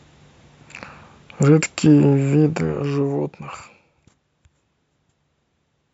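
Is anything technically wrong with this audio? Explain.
Yes. From 2.37 to 3.92 s, zipper noise: the level is lowered by roughly 15 dB in unsmoothed steps, around 40 a second, each step clicking, so a fine zipping rides on the speech.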